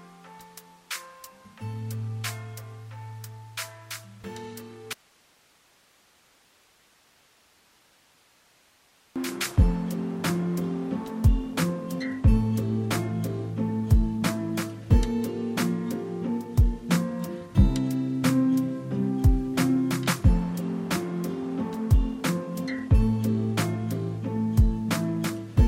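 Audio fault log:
4.93–9.16 s, audio dropout to a faint residue: the sound cuts abruptly, leaving only faint hiss, likely because the signal dropped while the path stayed live.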